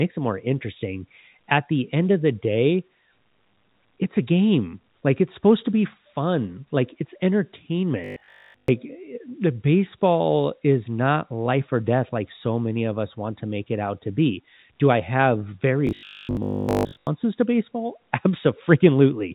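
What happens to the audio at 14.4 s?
Nothing goes wrong at 14.4 s: the speech carries on intact through that moment, with the narrow telephone band of the G.711 line running as it does throughout.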